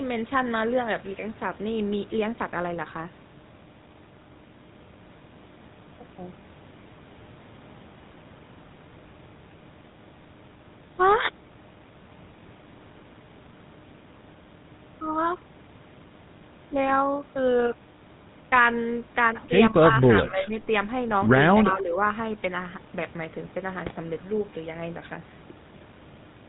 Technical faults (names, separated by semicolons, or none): GSM full-rate codec; speech suppressed in double talk; GSM bit errors